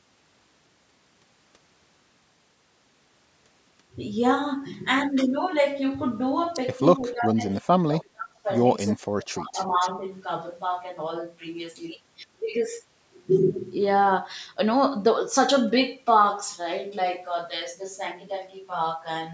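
From 7.01 to 8.46 s, and again from 8.92 to 10.02 s, the speech sinks by as much as about 30 dB. It dips. This is speech suppressed in double talk. Both sides likely talked at once, and the canceller turned everything down.

At 9.75 to 9.89 s, a short echo leak appears. A faint copy of the speech returns 263 ms late, about 20 dB below it. A loudspeaker's echo likely slipped past the canceller.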